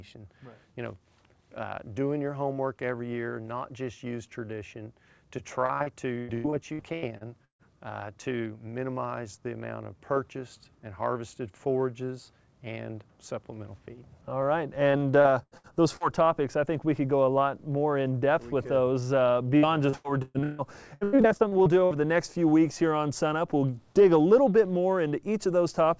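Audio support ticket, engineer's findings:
Repeated packet loss (robotic sound), 5.66–7.62 s: packets dropped or arrived late in quick succession. The receiver bridged each hole by extending the last sound, giving choppy audio with pieces missing. About 30% of the stretch is patched; the longest hole is 145 ms.

Same fault, 14.91–16.03 s: a shorter run with fewer, briefer stutters. About 21% is concealed; the longest hole is 86 ms.

Same fault, 19.57–21.94 s: the heaviest run, a sustained chop. About a third is concealed; the longest hole is 149 ms. The band stops at 8 kHz, which fits a G.722 call path.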